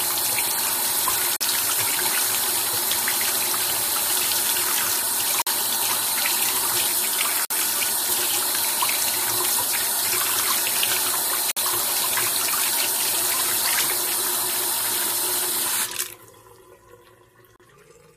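Gaps between stream segments occur at 1.36, 5.42, 7.45, 11.51 and 17.56 s, each a hard-edged silent hole of about 37 to 54 ms. At each join, the time stamps of consecutive segments leave a short interval uncovered, and the player fills it with silence rather than sound. Nothing is lost, but the sound drops out abruptly. The holes are spaced by multiples of roughly two seconds, which fits segments 2 s long.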